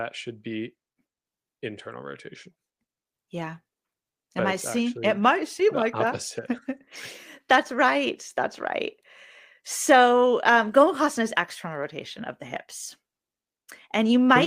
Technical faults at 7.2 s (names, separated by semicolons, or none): none